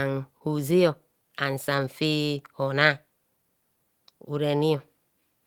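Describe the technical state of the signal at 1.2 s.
Repeated timing corrections are under way at 1.2 s, part of a run from 0.71 to 5.22 s. The receiver keeps inserting short repeated pieces, playing at about 98% speed and adding roughly a tenth of a second overall, heard, if at all, as slight hiccups and a dragging, unsteady tempo.

Clock drift between sender and receiver underlies this and runs through the whole clip. The sender's clock runs about 1.5% slow, so the jitter buffer keeps draining and the receiver must stretch the speech with those small repeats, unevenly spaced.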